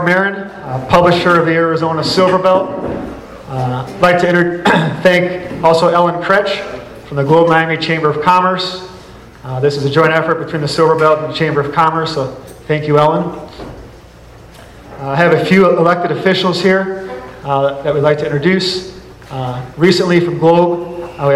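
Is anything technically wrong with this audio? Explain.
No, nothing in this audio points to a technical fault. Nothing heard calls for a fix.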